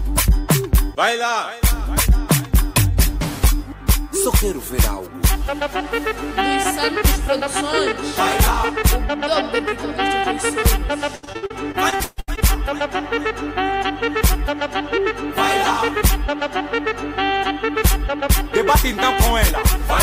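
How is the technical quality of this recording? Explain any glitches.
One glitch stands out. From 11.15 to 12.39 s there is repeated packet loss. Successive holes are patched by extending the last sound, making it choppy, with gaps up to 139 ms.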